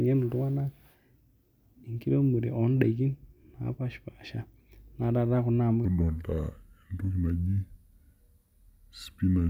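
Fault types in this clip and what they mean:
Section at the wrong speed: right after "kuna amu", from 5.85 s to the end at 9.50 s, the speech turns deep and dragging, slowed to 0.745 times its speed and roughly five semitones lower, likely from playback against a mismatched clock.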